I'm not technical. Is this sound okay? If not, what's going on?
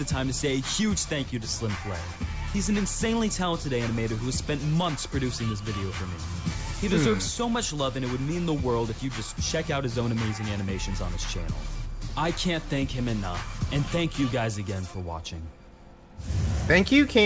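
Yes, nothing wrong can be heard anywhere in this recording.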